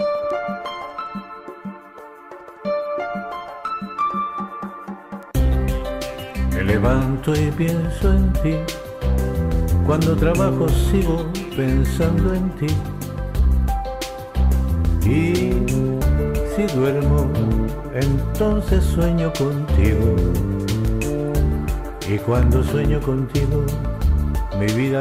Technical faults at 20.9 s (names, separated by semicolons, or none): bit error spike